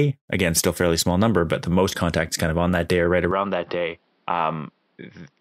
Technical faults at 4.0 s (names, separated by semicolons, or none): input switched to a poorer device